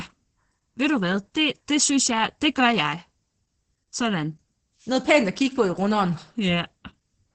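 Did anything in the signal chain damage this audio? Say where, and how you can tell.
Yes: Opus voice compression at the codec stage, throughout. Its SILK coder, likely near 10 kbps, caps the band at 8 kHz and quantises excitation coarsely, leaving the speech muffled, hoarse and faintly robotic.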